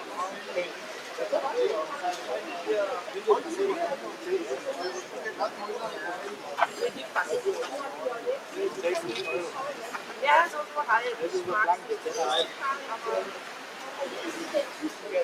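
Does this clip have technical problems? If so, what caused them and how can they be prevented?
Yes. A noise suppressor applied to music or sounds, a processor designed for speech, stayed active through the whole clip. It treats sustained tones, ambience and decaying tails as background noise and pulls them down, while sharp onsets pass largely intact. The result is a level that pumps and flutters, with the reduction swinging by about 5 dB as held sound fades under the onsets and the clip thins out between them. To prevent this, disable speech noise suppression or switch to a music mode whenever the source isn't speech.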